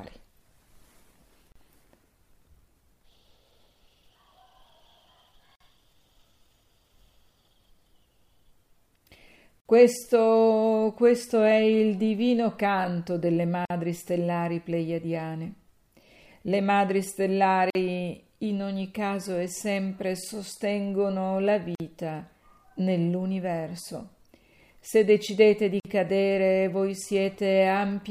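At 1.52 s a 35 ms silence opens, then 49 ms silences at 5.56, 9.60, 13.65, 17.70, 21.75 and 25.80 s. Each is a gap at a join of encoded pieces: the encoder's start-up delay and final-frame padding were left in. Unlike a dropout, the gaps come every 4 s and the sound picks up exactly where it stopped.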